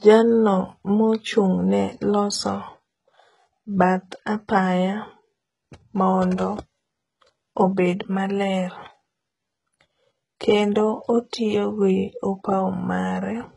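Across the whole speech clip the treble sounds bright but synthetic, with sibilants turning gritty and lispy, likely from HE-AAC compression at a very low bitrate, around 12 kbps. Copied low bands stand in for real treble, so a spectrogram shows repeated, misaligned harmonic patches and nothing above 11.1 kHz.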